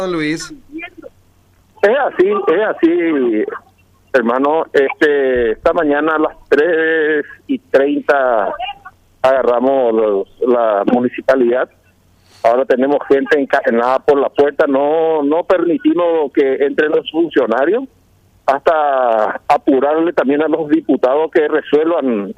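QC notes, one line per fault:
Nothing to flag here, as I didn't hear any technical faults anywhere in the audio.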